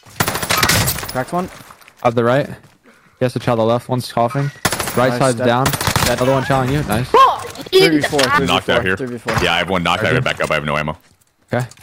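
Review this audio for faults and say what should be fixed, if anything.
Hard clipping runs through the whole clip: peaks are driven about 6 dB past what a stage can pass, so they are cut flat. Under one percent of samples hit the ceiling, giving crackle on peaks rather than continuous fuzz. Lower gain before the converter so peaks stay below full scale.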